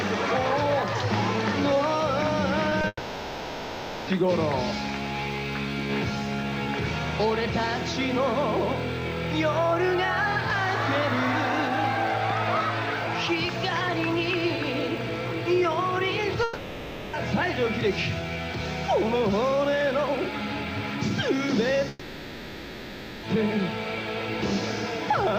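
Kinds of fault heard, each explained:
Short concealed packet loss: At 2.69 and 2.81 s, about 20 ms of audio failed to arrive in time. The receiver filled each gap by extending the preceding sound and then blended back in. Each one is heard as a brief smear or wobble.
Long network dropout: Three longer stretches are replaced by stretched, fading continuation of the prior sound. They run from 2.87 to 4.09 s, from 16.43 to 17.15 s, and from 21.89 to 23.25 s. The likely cause is a network outage, and the audio resumes further on.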